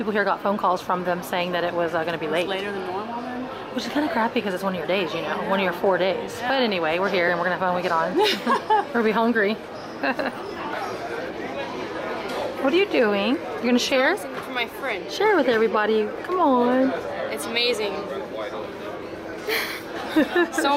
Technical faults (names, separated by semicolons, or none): damaged data in a compressed stream